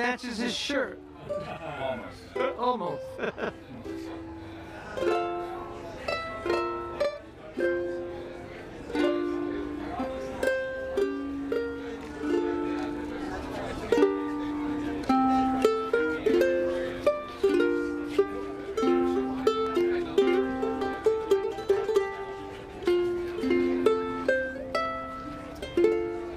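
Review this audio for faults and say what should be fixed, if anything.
One channel of the stereo path ran 40 ms late before the mix was folded to mono, so from 0.0 to 13.31 s the channel delay (doubling) puts a second, equally loud copy of the sound just behind the first, heard as a thickened slap. Check inter-channel alignment before any mono sum so both sides arrive together.

Between 19.67 and 20.38 s a disc blemish corrupted more data than error correction could rebuild, once per revolution. The player patched the gaps, leaving six CD scratch ticks, each at most a couple of milliseconds, of uneven strength. Rip from a clean disc with a secure, verifying extractor to prevent these.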